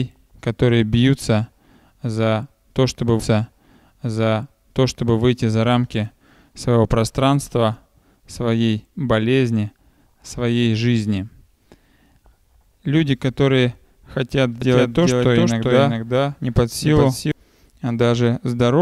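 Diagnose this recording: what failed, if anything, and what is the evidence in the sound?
The playback stage failed between 3.19 and 5.19 s, where a stream segment is repeated. Two seconds of the programme play a second time, with a small blip at the jump back. The player fetched or queued the same segment twice, so the timeline restarts rather than layering. That separates it from a doubled track: nothing overlaps, and the material simply runs again in sequence, lengthening the programme by those two seconds.

From 14.62 to 17.32 s there is a doubled audio track. A second full-band copy trails the original by about 0.4 s at roughly 5 dB lower. Unlike a room echo or reverb, the copy has no decay tail or room colour, and it switches on and off abruptly at both ends of the span. Most likely the same signal was captured again through a slower path, or an edit left two out-of-step copies mixed together.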